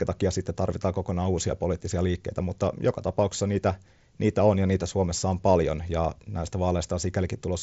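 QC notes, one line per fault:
No faults: speech runs over the Bluetooth mSBC headset codec, top end stopping at 7.7 kHz with the light codec grain that path leaves on louder passages.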